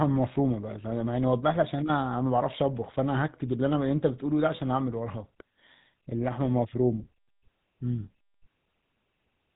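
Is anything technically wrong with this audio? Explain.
Yes. For the whole clip the speech has been through the GSM full-rate codec, which fits a 13 kbps GSM full-rate stream. The codec models the vocal tract and excites it with evenly spaced pulses built from only every third excitation sample, so fine detail in the voice is replaced by a coarse pulse train. The damage is plainly audible as a buzzy, gravelly roughness, and the sound is dull because nothing above 3.8 kHz passes.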